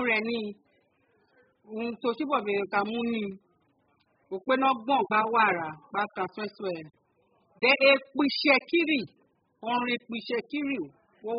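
From start to finish the speech is dull, with nothing above 5 kHz, and sibilants fizz and warble, which points to heavy AAC compression, likely at a very low bitrate around 8 kbps, rather than simple low-pass filtering.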